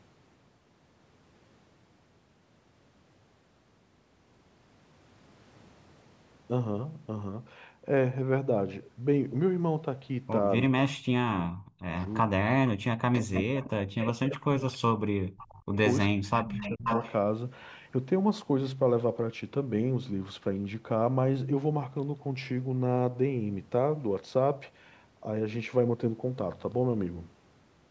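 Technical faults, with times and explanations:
10.67–11.95 s, 12.24–12.33 s, 12.87–15.73 s and 16.12–16.85 s: speech suppressed in double talk. The voice sinks by as much as about 40 dB in pieces: roughly a second, a brief tenth-of-a-second gap, about three seconds, then under a second. The likely cause is an echo canceller that couldn't tell the local talker from loudspeaker echo while both sides spoke, so it ducked everything. On a waveform the envelope collapses to near-flat; a spectrogram shows the speech bands fading to dark across those spans.
13.14–13.69 s, 14.0–14.09 s, 15.4 s and 16.35–17.13 s: echo leak. A delayed copy of the voice slips through, trailing by about 432 ms in the first three scraps and about 491 ms in the last. It sits about 10 dB below the speech, then about 20 dB below at 15.4 s, and rises to about 5 dB below in the final stretch. The likely cause is a loudspeaker on one side whose canceller missed part of the pickup. 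A spectrogram shows shifted repeats of the speech harmonics, and the waveform shows small secondary bursts offset from the main ones.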